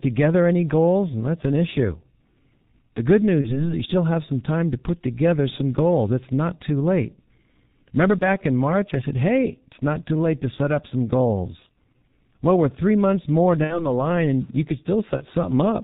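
Throughout, the speech has passed through the G.723.1 codec at about 6.3 kbit/s, and the damage is heavy. The codec discards everything above 4 kHz and rebuilds the voice from a coarse model refreshed only every 30 ms, so the sound is muffled and hoarse, and consonants smear into one another rather than landing crisply.

On top of that, VoIP packet loss concealed by the speech codec occurs four times. At each gap the decoder carries its last pitch and filter forward and lowers the gain, and because every frame builds on the one before, the damage lasts beyond the gap itself. From 3.41 to 3.73 s a stretched buzzy tone or coloured noise fades and the voice stays weak or distorted afterwards, which fits a single lost 30 ms frame. From 8.18 to 8.24 s there is a brief stretched, fading blur. From 13.64 to 14.00 s comes the longest distortion, pointing to about 60 ms lost. From 15.17 to 15.24 s there is a short fading smear.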